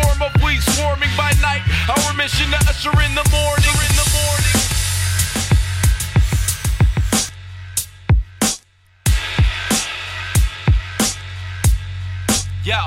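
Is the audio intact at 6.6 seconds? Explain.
No. From 3.59 to 7.29 s a doubled audio track runs, a full-band copy about 0.7 s late and roughly 5 dB quieter, likely from a second capture path. Unlike an echo, it has no decay and cuts in and out abruptly.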